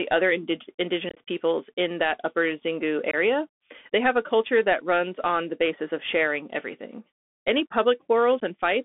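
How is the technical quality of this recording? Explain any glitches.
Technical quality is limited: the whole recording runs through a narrowband Bluetooth headset link, and it drops out briefly three times.

Throughout, the speech sounds thin and boxed-in, confined to roughly 250 Hz to 3.5 kHz, with scratchy s sounds and a granular hiss underneath. This is the Bluetooth CVSD headset codec, which sends one up-or-down bit per sample at 64 kHz with an adapting step size.

At 1.09 to 1.19 s, just before "peoples in that upper", the speech breaks into abrupt, chopped holes, about 52.5 ms of gaps scattered over 75 ms, the longest lasting 22.5 ms. Shorter clean-edged dropouts follow at 3.11 to 3.15 s, about 22.5 ms, and at 8.40 s, about 15 ms. These are unconcealed Bluetooth headset packet losses: short voice packets between headset and phone went missing, and silence or an idle pattern filled their place instead of any repair.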